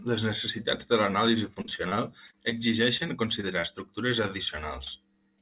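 A speech recording carried over a narrowband call line (nothing above 4 kHz, consistent with G.711 mu-law at 64 kbps) breaks into repeated packet loss (robotic sound) from 1.54 to 2.60 s, right after "les necessitats de l'anàlisi". About ten separate holes, none longer than about 22 ms, were each patched by extending the preceding sound, so roughly 18% of that second is synthetic continuation. The rapid succession of patches is what makes it choppy and mechanical rather than a single slur. Three isolated instances of short concealed packet loss follow at 2.97–3.01 s, 3.41–3.45 s and 3.61–3.65 s, each hiding about 20 ms of missing audio. Each registers as a brief smear or wobble where the decoder bridged the gap and faded back into real signal. Being single, spaced-out events, they lack the continuous robotic texture of the earlier burst.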